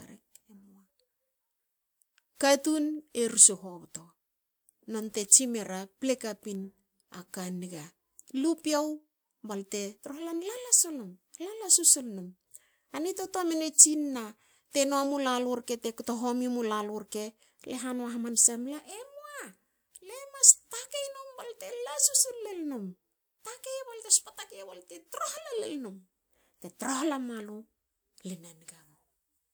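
No faults can be heard anywhere in the speech recording.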